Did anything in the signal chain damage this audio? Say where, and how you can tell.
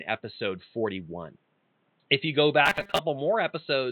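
Yes, there's robotic sound from repeated short buffers between 2.66 and 2.99 s, just after "you go". The speech turns into a stiff metallic buzz at 200 Hz, which matches a chunk of about 5 ms being looped over and over. About half of that stretch is repeats rather than fresh audio. That points to the driver or buffer stage, most likely audio arriving too late so the software kept replaying its last block while the real material was skipped.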